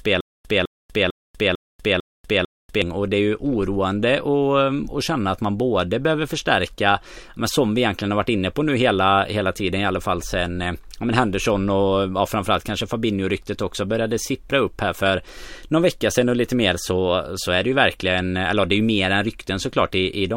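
The clip opens mid-fault with a stutter with silent gaps lasting until 2.82 s: a 205 ms fragment repeats six times, each followed by 243 ms of digital silence, an even 449 ms cycle. A stalled stream likely replayed its last fragment, losing the intended audio.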